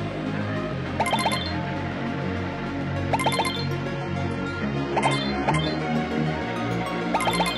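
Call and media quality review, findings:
Adaptive stream at a lower bitrate, 3.96 to 5.96 s: abrupt dulling with synthetic, swirly highs and no gap. Spectrogram shows a flat cutoff near 10.9 kHz and a smeared, patterned upper band. The player's adaptive logic switched renditions on a throughput dip; the sound points to a very low-rate HE-AAC tier.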